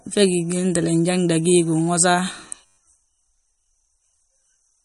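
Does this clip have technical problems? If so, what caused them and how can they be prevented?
Yes. Throughout the speech, the encoder seems to have been starved of bits, which points to a low-bitrate MP3 of about 48 kbps as the likely cause. To save data it removed everything above 11.2 kHz and dropped weak frequency content that flickers in and out between frames. The result is plainly audible MP3 compression damage: dull treble, a watery, swirling texture, metallic edges on sibilants, and smeared consonant onsets. Encoding at a higher bitrate prevents this.

From 2.66 to 2.77 s there is a system hang loop. The computer or driver stalled while the audio hardware kept replaying its ring buffer, repeating one 10.67 ms slice, which fits a 512-sample buffer, about eleven times. Because the loop is so short, it comes across as a steady buzz at 93.8 Hz rather than a stutter, and almost no audio is lost. 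Giving the audio thread priority and using stable drivers prevents such stalls.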